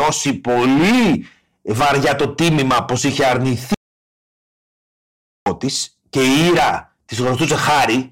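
Throughout the recording, the speech is driven about 14 dB past what some stage in the chain can pass, so the waveform's peaks are sliced flat. That hard clipping affects about a fifth of the samples, not just occasional peaks, and the squared-off tops throw harmonics high into the spectrum. The result is a constant harsh fuzz riding on every loud syllable, with the voice sounding gritty and compressed rather than crackling only now and then.

From 3.75 s to 5.46 s there is an audio dropout to silence lasting about 1.72 s. The input feeding the recorder was likely lost, through a disconnection, a broken link or an accidental mute, while writing continued with silence. The speech stops abruptly mid-flow and resumes just as suddenly. The gap is dead silence, with no room tone beneath it, and whatever was said during that stretch is gone.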